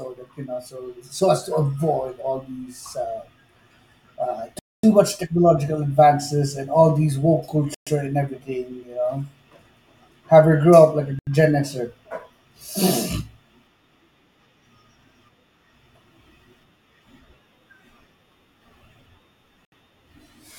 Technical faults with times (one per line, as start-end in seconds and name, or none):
4.59-4.83 Bluetooth stall
7.74-7.87 Bluetooth stall
11.19-11.27 Bluetooth stall
19.65-19.72 Bluetooth stall